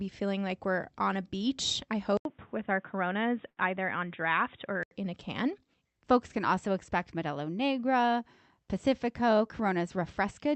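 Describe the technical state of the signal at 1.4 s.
At 1.4 s the signal is intact, with no fault present, and the speech carries only the ordinary character of the Opus call path, whose audio band tops out around 8 kHz.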